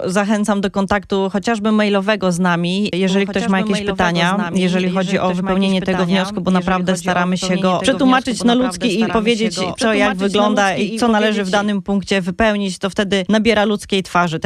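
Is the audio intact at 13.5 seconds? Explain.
Yes, the audio at 13.5 seconds is intact, with no fault heard at that moment.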